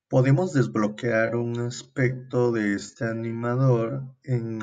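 From 0.93 s to the end, the speech runs at 0.61 times its original pace in a time-stretched section, likely from software lengthening the audio by repeating short pieces. It drags, but unlike slowed playback, the pitch doesn't drop.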